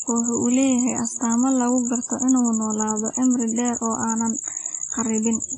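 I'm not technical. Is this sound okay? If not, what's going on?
No. From start to finish the speech sounds washy and metallic, with a hiss that swells and fades along with the talking, and the crisp top end is missing, with nothing above about 10.3 kHz. That points to heavy WMA compression, likely applied to shrink the file. The encoder stored the sound very sparingly, so the coarse approximation smears noise around each syllable and the finest, quietest detail was simply thrown away.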